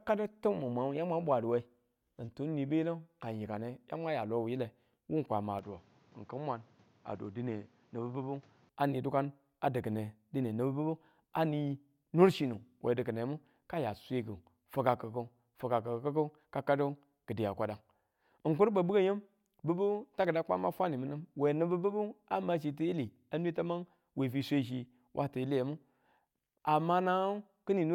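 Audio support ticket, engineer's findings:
Speech goes dull from 5.59 to 8.69 s, then opens back up. No gap at either switch. Nothing above 7.6 kHz in that stretch, level drops by about 5 dB, and a new noise floor sits roughly 30 dB under the speech. Likely the input switched to a poorer device mid-recording, a narrower-band device with its own tone and noise, then back to the original.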